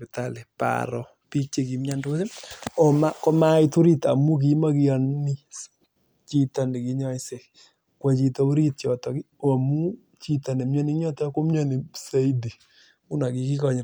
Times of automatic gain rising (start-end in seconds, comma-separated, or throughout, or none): none